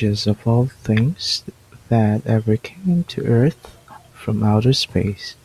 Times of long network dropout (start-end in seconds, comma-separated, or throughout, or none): none